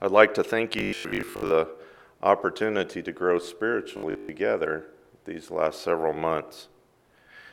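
Twice the sound collapses into a rigid metallic buzz, robotic sound from repeated short buffers, from 0.79 to 1.51 s and from 3.97 to 4.33 s. The buzz sits at 50 Hz, which fits a 20 ms chunk being looped, most likely because new audio arrived too slowly and most of the real signal was skipped. A spectrogram shows evenly spaced harmonic lines 50 Hz apart, and the waveform shows identical 20 ms cycles.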